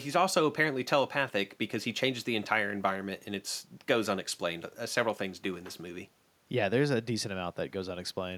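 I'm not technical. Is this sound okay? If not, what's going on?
Yes, no faults can be heard.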